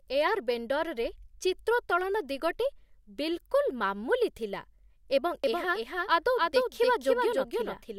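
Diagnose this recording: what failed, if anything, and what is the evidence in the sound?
A doubled audio track starts at 5.44 s and runs to the end: a second full-band copy of the speech trails by roughly 300 ms, about 5 dB quieter, switching in abruptly with no decay or room colour. The likely cause is a slower second capture path, or an edit holding two out-of-step copies.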